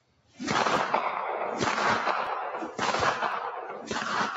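Noise suppressor applied to music or sounds, across the whole clip: a suppressor tuned for speech stays active and treats sustained tones, ambience and decaying tails as background noise, pulling them down while sharper onsets pass. The level of held material swings by roughly 10 dB as the gain rides up and down, so the sound pumps and thins instead of sitting steadily.

Sound cut by the noise suppressor, from 0.0 to 0.4 s: the opening stretch is misread as noise and pressed down hard, by about 18 dB at its deepest. For close to half a second the start sounds sunken and hollow, as though the sound hasn't fully arrived yet, with its sustained content reduced far more than any attack within it.

Dropped buffer (overrun), at 0.76, 2.27 and 3.32 s: each time there is a slight jump forward in the audio and no gap of silence. A few milliseconds go missing at each point, and the sound on either side is joined directly. 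The likely cause is the capture side failing to read its samples before the hardware wrote over them.

Sound cut by the noise suppressor again, from 3.51 to 3.93 s: the suppressor clamps down on a steady or fading passage a second time, more gently than at the start, dipping by about 8 dB. The sustained part sags for roughly 0.4 s, while any sharp onsets in it come through largely intact.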